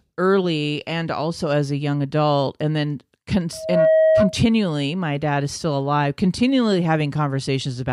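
At 3.52 s the microphone begins picking up its own loudspeaker, and the loop gain tips above one at 637 Hz, causing loudspeaker feedback squeal. A pure tone swells over roughly a third of a second, rising a few decibels above the speech, and rings until 4.39 s.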